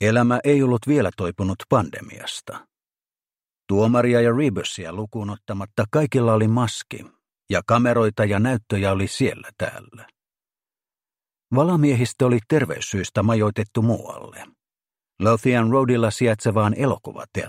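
At 4.76 s the level drops abruptly by about 8 dB. This is a sudden gain jump. The sound and its background noise fall together, in a single step, with no fade. The lower level holds until 5.68 s, then returns just as abruptly. The likely cause is a digital gain change applied from one sample to the next, without any ramp, such as a setting or bit shift switched in and then out.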